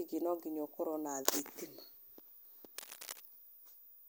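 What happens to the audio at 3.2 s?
Right around 3.2 s you're at the tail end of a burst of cable scratch noise that runs from about 2.78 to 3.20 s. It sits only a little below the speech, a dense, uneven rustle and scratch laid over the top. The likely cause is a worn cable or connector getting moved, so its contact resistance jumps around quickly and dumps those ragged noise bursts straight into the signal until it settles again.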